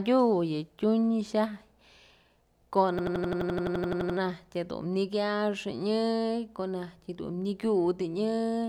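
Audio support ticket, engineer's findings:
System hang loop, 2.99–4.18 s: identical 85 ms slice repeats at 11.7 Hz, a machine-gun stutter. Driver froze and the ring buffer kept cycling, which fits 4096 samples. Exact repeats, not dropouts.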